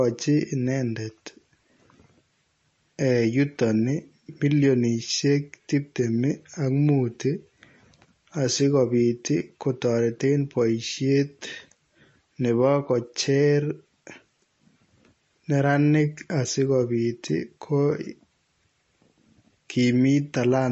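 A speech clip with plainly audible codec damage from start to finish. Nothing is present above 7.9 kHz. The sound is watery and swirly. The likely cause is MP3 compression at a low bitrate, near 34 kbps, which cuts the treble and drops weak frequency lines.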